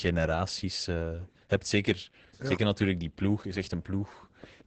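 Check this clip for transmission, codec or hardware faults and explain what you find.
One codec fault runs through the whole clip. Opus voice compression: SILK linear-prediction coding caps the band near 8 kHz and coarsely codes excitation, which fits about 10 kbps. The speech sounds muffled, hoarse and slightly robotic.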